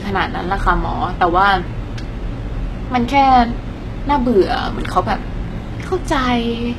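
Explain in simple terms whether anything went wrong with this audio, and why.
Yes. The speech sounds heavily squashed throughout, with nothing above 12.3 kHz. Likely HE-AAC compression: the treble is rebuilt from lower sounds, so s sounds turn gritty and metallic.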